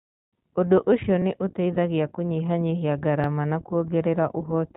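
Throughout, the speech has the iLBC codec's narrowband character. Nothing above 4 kHz survives, and the voice is plainly rough and synthetic, which fits the 15.2 kbps mode with 20 ms frames. From 1.22 to 1.24 s there are overlapping chunks: about 23 ms of audio plays twice where two processing chunks join, giving a brief stutter. From 1.74 to 1.76 s, one lost iLBC frame is bridged by a repeated pitch cycle mixed with noise. This produces a short buzzy hold lasting 20 ms, and the speech recovers immediately afterwards. The chunk overlap recurs at 3.24 to 3.27 s, 2 s after the first, with the same 23 ms repeat and stutter.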